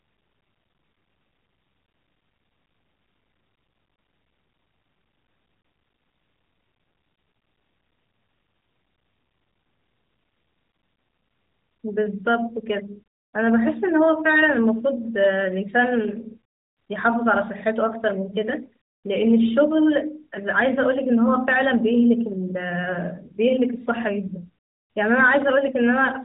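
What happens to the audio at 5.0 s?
At 5.0 s the speech continues intact, with no dropout, click or other fault.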